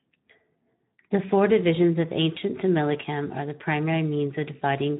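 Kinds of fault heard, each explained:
Speex codec: The speech is running through Speex, the old CELP codec from VoIP and game chat, and the damage is plainly audible across the whole clip. With so few bits for the excitation, voiced sounds come out rough and grainy rather than clean. There's also nothing above about 3.8 kHz, so it's a narrowband, phone-like signal. That combination fits a low-to-middle setting somewhere around 11 kbps.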